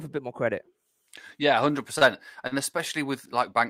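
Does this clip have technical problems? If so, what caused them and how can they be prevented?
Yes. The speech has two short stalls from a late packet, at 1.99 to 2.03 s and at 2.47 to 2.53 s. Each time a packet missed its playout deadline, so the jitter buffer ran dry. The receiver held the last sound for 26 ms and then 40 ms, resuming at the same point once the packet arrived. No audio is lost, but each stall adds that much delay, with a slight buzz or dip. A deeper or adaptive jitter buffer, plus reduced network jitter through prioritised routing, would prevent these stalls.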